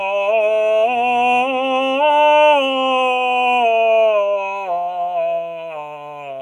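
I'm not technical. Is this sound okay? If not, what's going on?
No. A noise suppressor applied to music was left switched on, treating held tones and ambience as noise, so the music pumps and thins throughout. The sound was also cut by the noise suppressor from 4.46 to 4.7 seconds, a brief dip, and again from 5.39 seconds to the end, where lingering tones sink noticeably.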